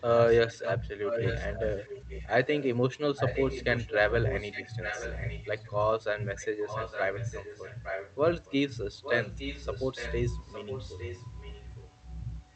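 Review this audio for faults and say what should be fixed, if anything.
An echo leak runs through nearly the whole speech clip, in stretches at 0.0–0.73, 1.04–2.65, 3.16–3.95, 4.28–5.71, 6.37–8.55, 9.02–10.15 and 10.48–11.9 s. A delayed copy of the speech trails it by 860 ms, loud at first and fading in steps by the end. This is likely a far-end loudspeaker whose echo canceller failed to remove the returned signal. Fix it with working acoustic echo cancellation at that end, or by using a headset there.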